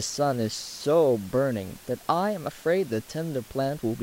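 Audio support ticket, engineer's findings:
No fault found; room noise about 23 dB down.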